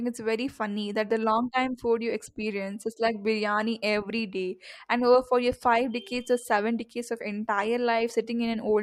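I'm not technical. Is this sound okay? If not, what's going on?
Yes, there's nothing wrong with this recording.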